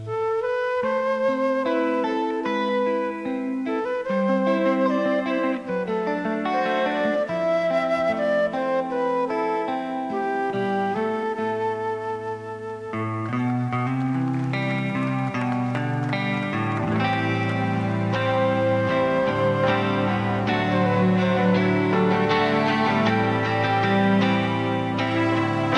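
No technical faults can be heard anywhere in the audio, which stays continuous and stable throughout.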